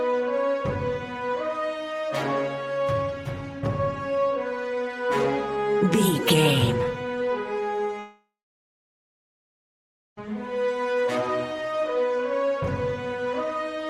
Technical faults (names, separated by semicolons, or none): long network dropout